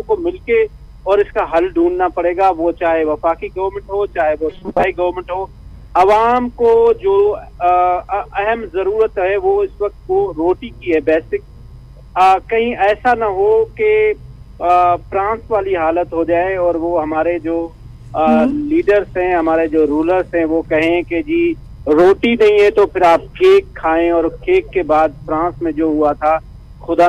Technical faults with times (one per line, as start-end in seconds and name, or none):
4.50-4.84 robotic sound from repeated short buffers